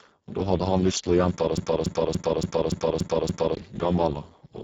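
A speech recording that's been squeezed hard through the Speex codec for its whole length: the voice comes across noisy and hoarse, the kind of heavy damage that fits a very low bitrate of around 6 kbps, where the excitation is starved of bits. Nothing survives above about 7.6 kHz. Then from 1.57 s to 3.55 s there's a broken-record loop: a 286 ms chunk repeats exactly, back to back, seven times over, and whatever should have played in those two seconds is simply gone. That's most likely the player or stream stalling and re-sending the last fragment it had buffered until it caught up.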